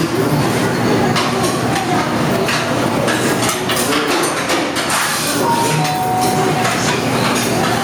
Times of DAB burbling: none

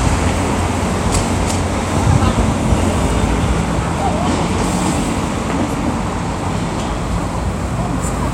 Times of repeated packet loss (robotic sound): none

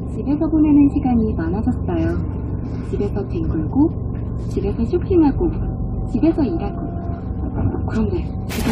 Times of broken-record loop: none

